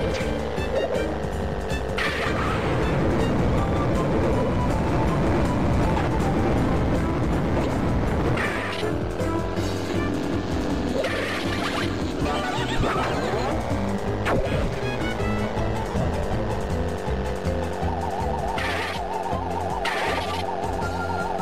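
Lost LE Audio frames at 3.91 s, 8.53–8.56 s, 12.18–12.26 s and 15.88–16.08 s: dropouts of 15 to 120 ms, the later two scattered in runs of around 30 ms. The decoder concealed them by repeating the last spectrum with random phase, giving short noisy smears. On a spectrogram these appear as blurred vertical patches where harmonic lines dissolve. On the waveform they show as brief ragged segments.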